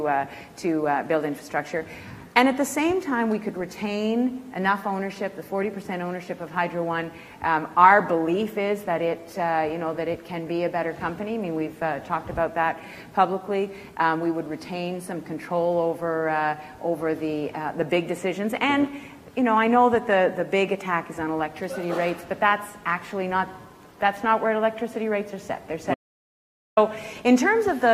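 Near the end, at 25.94 s, the audio drops out to dead silence until 26.77 s, so about 0.83 s is simply gone with no room tone underneath. That's an audio dropout to silence, likely a lost input link while the recorder kept writing silence.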